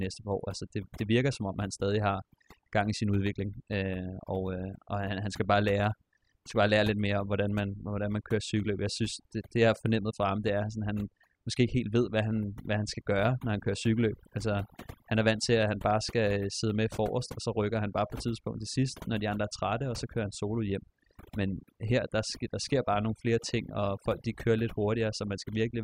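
A speech recording with overdone noise removal running the whole way through. The denoiser was pushed too hard, so quiet parts of the voice get pulled down along with the noise. The gaps drop in level and break up into twinkly specks.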